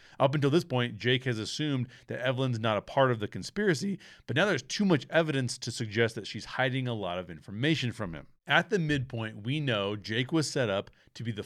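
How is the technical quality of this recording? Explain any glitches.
The recording carries no audible technical glitches, with the speech signal holding steady and intact throughout.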